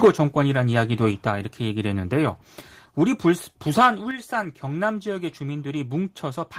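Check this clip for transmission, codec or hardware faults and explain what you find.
Two faults are present: a burst of microphone overload at the very start, and two sudden microphone volume step-downs.

From 0.04 to 0.08 s, peaks overshoot by about 6 dB and roughly a third of samples flatten, likely input gain set too high. The waveform shows squared-off tops, the spectrogram a broadband smear, and the sound is a harsh crackle.

At 0.05 s the level drops by about 4 dB, and at 4.11 s by about 6 dB, likely the call software lowering microphone gain. The waveform envelope shrinks abruptly, and voice and background fall together.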